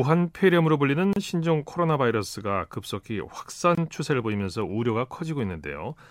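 At 1.13 to 1.16 s and again at 3.75 to 3.78 s, the speech drops out for about 31 ms and then 24 ms: a gap at a join of encoded pieces. Separately encoded segments were butted together with the encoder's start delay and last-frame padding left in, so brief holes of silence interrupt otherwise continuous sound, heard as tiny stutters. A waveform shows flat stretches with smeared edges. A spectrogram shows thin vertical blank bands.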